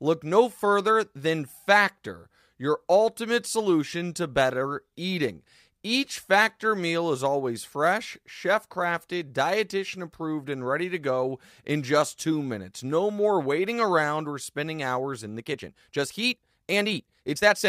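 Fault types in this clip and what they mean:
Time-stretched section: From 15.33 s to the end, speech runs 1.56 times faster at unchanged pitch. It sounds rushed. Software likely dropped short pieces to shorten it.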